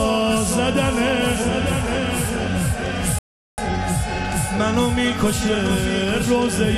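At 3.19 s the player exhausts its downloaded audio and halts playback while it waits for more data, a rebuffering stall. The sound drops abruptly to silence and stays there until 3.58 s, when it picks up again at exactly the point where it broke off. No material is skipped or repeated; the gap simply inserts about 0.39 s of dead air, stretching the timeline by that amount.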